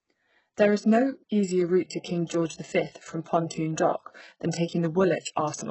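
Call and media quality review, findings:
HE-AAC compression, whole clip: treble synthetic and gritty, sibilants metallic and lispy, no content above 8 kHz, heavy codec damage throughout. Likely cause is HE-AAC spectral band replication: upper bands copied from lower ones under a coarse envelope, so harmonics misalign at the crossover. The damage fits a very low bitrate, around 8 kbps.

Pre-echo, 2.27 to 2.30 s: a brief hiss of about 30 ms ahead of a sharp attack, onset softened and smeared. The transform codec spreads quantisation noise across the whole block, so noise sized for the loud attack leaks into the quiet stretch just before it.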